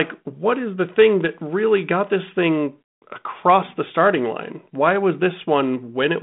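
No faults are audible in this speech; the band tops out around 3.8 kHz, consistent with a 32 kbit/s G.726 telephone path.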